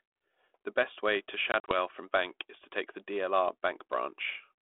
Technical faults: packet loss on an ADPCM call

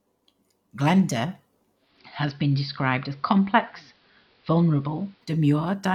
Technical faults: digital radio blending to analogue

